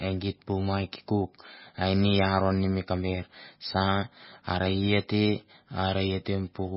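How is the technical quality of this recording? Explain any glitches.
Quality is poor throughout. The speech sounds watery and swirly, with nothing above 5.6 kHz. This is likely heavy MP3 compression, fitting a very low bitrate near 18 kbps, which cuts the treble and flickers weak frequency components frame to frame.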